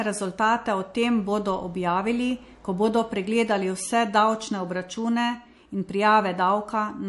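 MP3 compression is the likely cause of damage running throughout the speech. Nothing sounds above 11.3 kHz, and weak frequency detail flickers in and out between frames, giving a watery, swirly texture and smeared consonants, which fits a low bitrate near 51 kbps.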